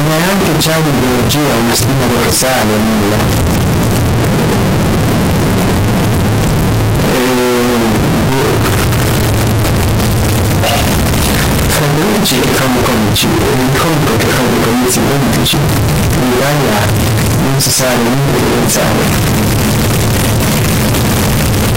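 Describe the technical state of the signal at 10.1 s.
At 10.1 s, as throughout the clip, the 32-bit float samples are likely being read as 32-bit integers. Sign and exponent bits then dominate each value, so the waveform sits near-square at an almost fixed, high level: very loud, harsh, with background noise as loud as the main sound.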